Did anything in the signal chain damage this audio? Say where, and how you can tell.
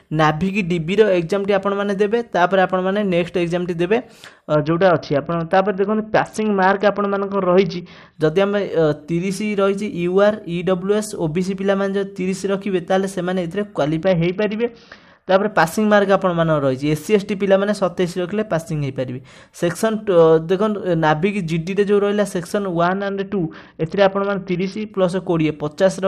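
Yes, the Bluetooth codec stage shows three Bluetooth SBC bit pool drops, at 4.54–8.15 s, 14.03–15.50 s and 22.84–24.91 s. Treble dulls and gritty noise rises each time, which points to a congested link cutting SBC to about 61 kbps, starving the top sub-bands and quantising the rest coarsely.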